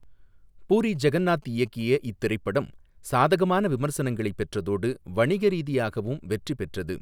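From 0.87 to 1.91 s, GSM signalling bursts break through beneath the speech: a galloping dit-dit-dit of brief buzzes at about 217 Hz, roughly 30 dB down. A nearby 2G phone's signalling transmissions are being rectified inside the audio circuitry.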